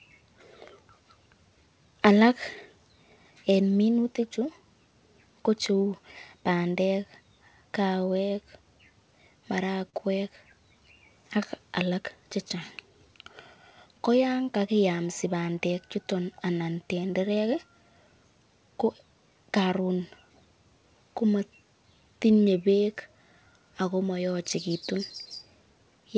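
At 9.90 to 9.94 s the speech catches on a short stall from a late packet. A packet missed its playout time, the jitter buffer emptied, and the receiver held the last sound for about 36 ms until the data arrived, then resumed where it left off. You hear a brief smeared, faintly buzzy stretch rather than a gap. Unlike a lost packet, nothing is skipped, but everything after it plays about 36 ms later. The band ends at 8 kHz, which fits G.722 on this call path.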